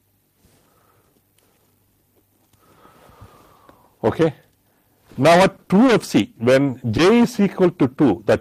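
From 5.13 to 5.90 s there's a patch of repeated packet loss, the robotic-sounding kind. Over that stretch the stream keeps dropping out: five separate gaps, none longer than about 20 ms. The receiver papers over each one by carrying the previous sound forward, about 90 ms of filler in all, with roughly 40 ms that never got covered. Only about 12 percent of the stretch is patched, but the holes come close together, so it sounds choppy, with small pieces chipped out.

Then at 6.66 to 6.70 s there's a single short concealed packet loss. About 20 ms of audio didn't reach the decoder in time, and another 20 ms or so was filled in by extending what came just before and then blending back into the real signal. It's very brief, so what you hear is a quick smear or tiny wobble rather than a proper dropout. Any short transient sitting in that spot could easily get swallowed by the patch.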